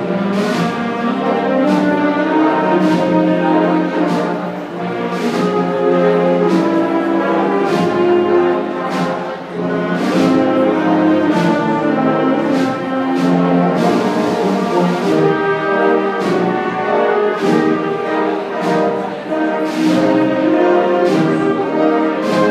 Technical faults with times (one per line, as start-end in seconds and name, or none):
none